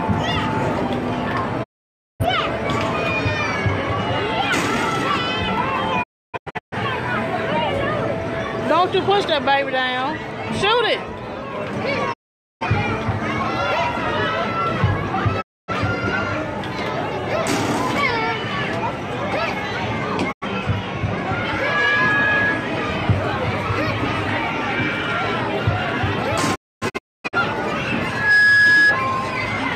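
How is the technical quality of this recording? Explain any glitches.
The recording has two recurring faults: repeated digital broadcast dropouts and two bursts of loudspeaker feedback squeal.

The digital broadcast dropouts occur at 1.62–2.25, 6.02–6.77, 12.12–12.66, 15.40–15.72, 20.31–20.46 and 26.54–27.37 s. Each time, the receiver lost valid frames and muted. The sound fades out within about 20 ms and then comes back, and whatever was sent during the gap is lost. The dropouts at 6.02 and 26.54 s break into several short holes.

The loudspeaker feedback squeal occurs at 21.50–22.77 s and 28.07–29.05 s. A microphone picked up its own loudspeaker, and the loop gain at 1.7 kHz exceeded one. A single tone swells within about a third of a second, reaching about 5 dB and then about 10 dB above the programme.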